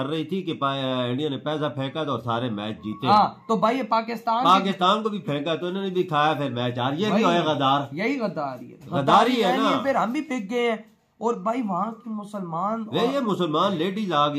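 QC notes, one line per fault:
3.11–3.18 s, 4.46–4.89 s, 9.09–9.22 s: hard clipping, peaks overdriven by about 2 dB, then about 4 dB, flattened tops adding high harmonics heard as crackle.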